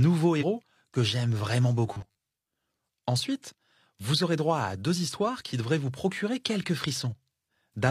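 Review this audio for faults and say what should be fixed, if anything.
From 0.38 to 0.44 s, just before "que j'aime vraiment", damaged data in a compressed stream makes the decoder misread frames and lose sync as it resyncs. Fix: verify stream integrity with checksums and reliable transport.

From 1.87 to 2.18 s, right after "que j'aime vraiment", the sound turns into a rigid metallic buzz at 100 Hz, with roughly half the audio replaced. This is likely robotic sound from repeated short buffers, each about 10 ms. Unlike a one-off chirp, it holds a steady pitch. Fix: enlarge buffering so new audio always arrives in time.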